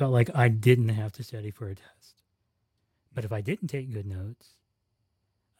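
Zipper noise runs from 0.70 to 1.35 s, just after "like I" and ending before "for a test". The level in this speech drops by roughly 15 dB, but in 1 dB jumps instead of a continuous glide, about 40 steps a second. Each jump leaves a tiny discontinuity in the waveform, and together they form a fine ticking buzz that rides on the speech for the whole of the move.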